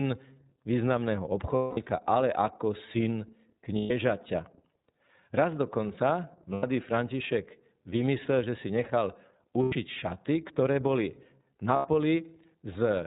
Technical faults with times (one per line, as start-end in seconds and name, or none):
0.00-13.07 iLBC codec
1.55-1.78 lost iLBC frames
3.78-3.91 lost iLBC frames
6.53-6.64 lost iLBC frames
9.63-9.75 lost iLBC frames
11.76-11.86 lost iLBC frames